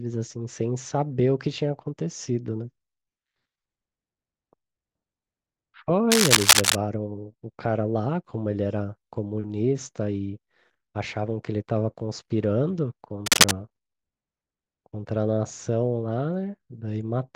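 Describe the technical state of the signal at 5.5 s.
At 5.5 s the speech signal is intact, with no fault audible at that moment.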